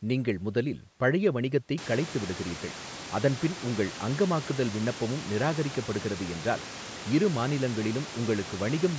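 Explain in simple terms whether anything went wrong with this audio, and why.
Nothing went wrong with this audio: the background noise that gets louder around 2 seconds in comes from the room itself.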